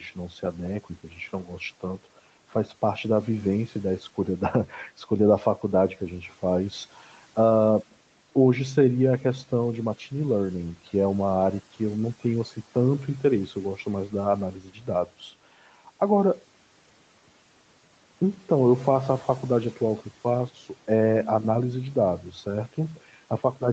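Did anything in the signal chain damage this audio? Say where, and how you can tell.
Yes. Speech cut by the noise suppressor at 1.04 to 1.18 s and 14.53 to 14.88 s, in call processing: the speech dips by about 7 dB, then about 10 dB, and sounds swallowed because the suppressor treated it as background noise.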